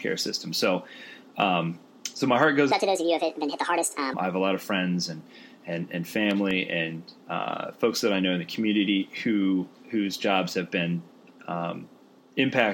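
A section at the wrong speed runs from 2.72 to 4.14 s. Playback there was most likely clocked against the wrong rate, so the sound moves 1.59 times faster than it was captured, and pitch and tempo shift together. Over that stretch the audio jumps abruptly higher, by about seven semitones, and sounds hurried, then drops back to its proper speed and pitch just as suddenly. Later, between 5.92 and 6.70 s, there are CD scratch ticks. A blemish on the disc ruined more data than error correction could restore on successive rotations, so the player had to patch or silence the damaged samples each time the flaw came round. The result is five brief, regularly spaced ticks of uneven strength across that span, the longest lasting about 0.7 ms.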